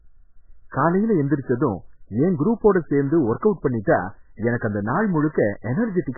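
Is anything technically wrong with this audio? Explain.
Yes. Throughout the speech there's heavy MP3 compression damage, likely from a starved bitrate, something like 8 kbps. Nothing survives above 2.1 kHz, so it's dull and muffled, and the weak frequency lines flicker between frames, giving that watery, swirly texture.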